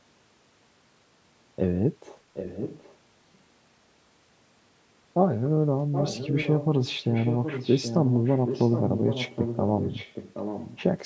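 An echo canceller on a loudspeaker end likely failed, causing echo leak: a delayed copy of the speech trails about 0.77 s behind, at 2.34–2.97 s, 5.92–6.66 s and 6.83–10.83 s, loudest around 6 s.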